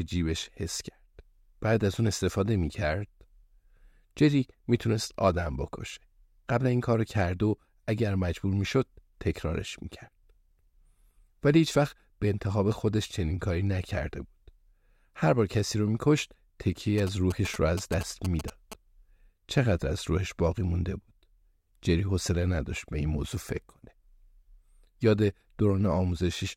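From 16.98 to 18.74 s, a galloping dit-dit-dit pattern of short 217 Hz buzzes cuts across the speech, sitting roughly 10 dB below it. These are GSM signalling bursts: a nearby 2G phone exchanging brief control traffic with the network, its radio pulses rectified by the audio circuitry into audible noise. Mains hum is a steady tone, and an active call produces a continuous buzz. These bursts arrive in short, uneven clusters and then stop.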